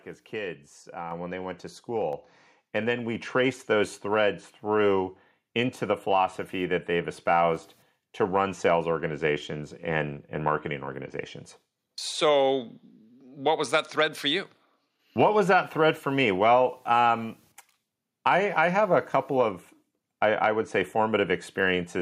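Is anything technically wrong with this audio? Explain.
Yes. At 1.11 s, after "as kids", and again at 2.13 s, after "when they went to", the microphone volume steps up, by about 5 dB and about 4 dB. Automatic input-gain control raised the device level abruptly, so speech and background jump louder together.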